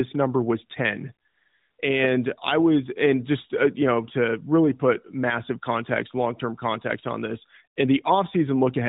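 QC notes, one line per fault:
1.28–1.78 s, AMR comfort noise: for half a second the phone treated the pause as silence and sent no speech frames, so the receiving end filled the gap with synthetic noise built from a rough estimate of the background's level and spectral shape. The real room sound gives way to a smooth, even hiss that switches in and out at the edges. A dropout would leave dead silence, and a noise gate would cut to near-nothing rather than to a steady manufactured floor. The hiss stays inside the AMR narrowband codec's band, with nothing above 4 kHz.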